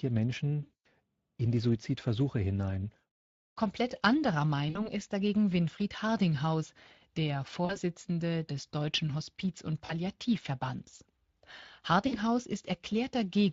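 Speech, with plainly audible Speex codec damage throughout: the voice has a noisy, hoarse grain because this CELP coder models the excitation coarsely, and the sound fits a rate around 20 kbps. On a spectrogram, harmonics look ragged and fuzzy, with noise filling the gaps between them. VoIP packet loss concealed by the speech codec interrupts the sound at 0.63–0.86 s (220 ms, just before "in die"), 4.69–4.88 s (just before "ist dagegen"), 7.65–7.78 s, 9.85–9.94 s and 12.07–12.18 s. In each gap the decoder keeps repeating its last pitch and filter at falling gain, so the sound stretches into a buzzy tone or coloured noise that fades. On the spectrogram this shows as flat, unchanging bands that dim, and in the waveform as a decaying, overly regular envelope. Because each frame is built from the one before, the voice stays weak or distorted for a short while after each gap.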